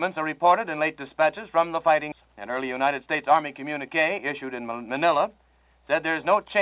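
The audio passes through a call codec consistent with G.711 A-law, with nothing above 4 kHz, and it has two faults close together. At 2.12 s there is a skip ahead. About half a second of audio is simply missing, and playback jumps straight to later material with no gap and no fill. On a waveform this looks like an abrupt splice where the envelope and phase do not line up. On a spectrogram the harmonic tracks and formant patterns break off and resume at a different place, with no silent band between them. Right after that, from 2.2 s to 3.42 s, comes a jitter buffer speed-up. The receiver is draining excess buffered audio by cutting out short pitch-period-sized pieces again and again. Playback runs at about 108% speed with unchanged pitch, so the sound feels slightly hurried, and roughly a tenth of a second is removed in total. A spectrogram shows harmonics at their normal spacing but compressed in time, with events arriving a little early. 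A waveform shows periodic cycles with small, regular omissions.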